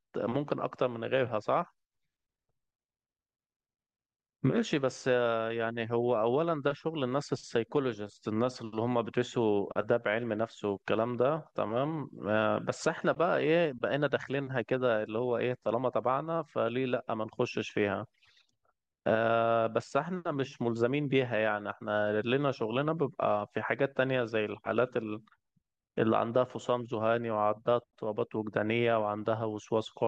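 A speech recording, with no technical faults to identify. Nothing in it calls for a time or a cause.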